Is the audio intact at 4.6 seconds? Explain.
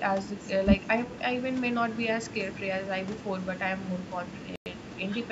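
No. At 4.6 seconds the speech drops into a Bluetooth stall. From 4.56 to 4.66 s the sound cuts to about 100 ms of silence and then resumes. The likely cause is radio interference holding back packets on the wireless link. The headphones' buffer ran empty while they waited. Playback paused until the resent packets arrived. The gap is a clean dropout with no fade.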